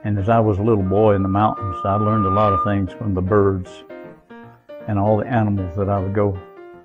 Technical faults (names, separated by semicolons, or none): loudspeaker feedback squeal